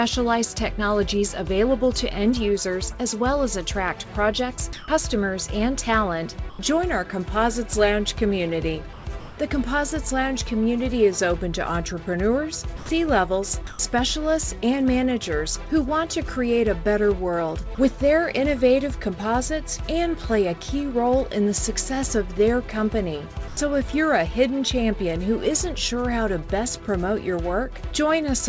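The sender's voice detector likely misjudged parts of the audio as background and stopped transmitting, so the receiver filled the gaps with comfort noise. The sound dropped by the voice detector gives way briefly to steady hiss at 4.73–4.88 s, 6.50–6.59 s, 8.93–9.05 s, 12.77–12.89 s, 13.67–13.79 s, 17.75–17.78 s and 23.48–23.57 s, lasting 30 to 150 ms each time. From 9.20 to 9.38 s, comfort noise in place of the background likely appears after transmission paused. The real background, about 19 dB below the loud parts, becomes a smooth, detail-free noise at the same level. Throughout, the G.722 call path leaves nothing above 8 kHz.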